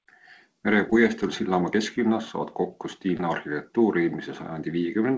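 At 0.90 to 0.93 s and again at 3.17 to 3.21 s there is short concealed packet loss. About 20 ms of the call reached the decoder too late, and the receiver filled the gap by extending the preceding sound before blending back into the real signal. Each event comes across as a brief smear or wobble rather than a hard silence, which sets it apart from a plain dropout. Both sit within the wideband call sound, where nothing above 8 kHz comes through.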